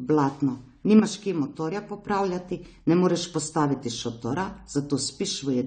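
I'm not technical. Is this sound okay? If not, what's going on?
No. The whole speech clip sounds dull and smeared, with the crispest high sounds missing, most likely from heavy AAC compression squeezing the file too small. From 0.99 to 2.08 s the sound suddenly drops quieter, then returns, likely because one channel drops out briefly.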